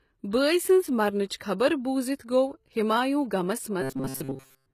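A speech clip whose treble sounds plainly gritty and lispy throughout, with s sounds turned metallic, likely from HE-AAC compression rebuilding the top band by copying lower harmonics upward, which fits a low bitrate around 20 kbps. At 1.29 s, between "بٲے سنٛز" and "خبر بوزِتھ", an attack is smeared by a brief hiss just ahead of it. This is pre-echo, where block-wide quantisation noise spreads about 18 ms before the onset. From 3.81 s, right after "ہمایوں غمس", to the end, the sound becomes a rigid 133 Hz buzz that only roughly follows the original, with most of that stretch repeated. This robotic sound likely comes from repeated short buffers of about 7.5 ms replaying while real audio is skipped.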